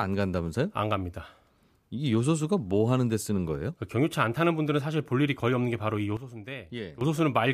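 At 6.17 s the speech and background noise drop together by about 12 dB in one step, a sudden gain jump, recovering at 7.01 s. An unramped digital gain change is the likely cause. The waveform shows a hard step in the envelope, and the spectrogram dims uniformly, noise floor included.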